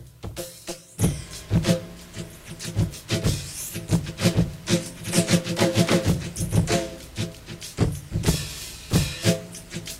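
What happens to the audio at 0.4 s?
Nothing goes wrong at 0.4 s; the audio plays through that moment intact, with no dropout, click or other disturbance.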